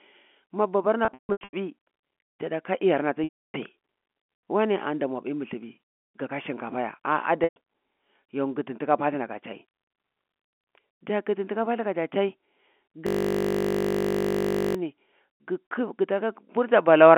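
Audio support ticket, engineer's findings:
Loudspeaker feedback squeal: pure 6.5 kHz tone swelling over about 1 s, peaking about 15 dB above the speech, 0.58–2.05 s, cut off just before "jada ka iyarna ta". Recurs 11.27–12.04 s, faster build (about 0.3 s), about 5 dB above. Mic picking up its own speaker; loop gain above unity at 6.5 kHz.

Packet loss with pitch repetition: brief held buzzy sound fading to silence, then speech cross-fading back. At 1.05–1.53 s, about 360 ms lost in scattered bursts over 480 ms, longest 150 ms. At 3.24–3.54 s, a 300 ms gap straight after "jada ka iyarna ta". At 7.44–7.56 s, 120 ms. Receiver concealment repeats the last pitch cycle to bridge dropped packets on the G.711 telephone-band stream. Gap sizes fit 30 ms packets.

System hang loop: steady 50 Hz buzz, 13.07–14.75 s. The same 20 ms of audio replays exactly, over eighty times. The host or driver stalled while the audio hardware kept cycling one ring buffer.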